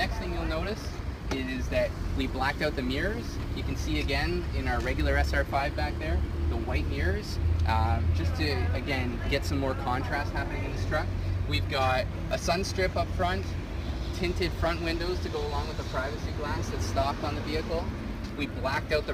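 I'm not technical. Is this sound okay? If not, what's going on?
No, there's a crude rate conversion running through the whole clip: samples were simply dropped, likely going from 48 kHz to 44.1 kHz, adding a gritty fizz on loud, bright sounds.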